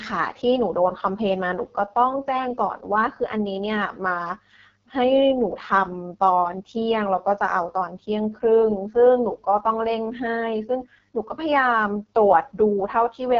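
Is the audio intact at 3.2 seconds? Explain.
No. At 3.2 seconds, as across the whole speech clip, the AMR wideband (HD Voice) codec is at work, and its heavy damage points to the lowest mode, around 6.6 kbit/s. At that rate the vocal tract model and sparse pulse excitation can't follow the voice closely, so it sounds rough and raspy. On a spectrogram the harmonics look smeared, a hazy noise band sits above 6.4 kHz, and everything stops abruptly near 7.6 kHz.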